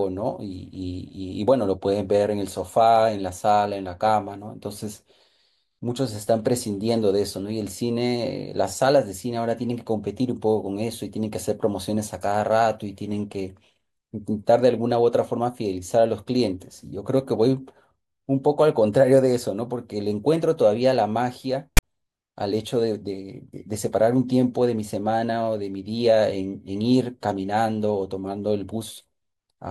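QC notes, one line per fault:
21.77–21.83 s: file tags played as audio. A short block of text tags is read as if it were samples. The speech cuts to a loud, hard-edged rasp pushed to one side, then drops to dead silence where zero padding follows.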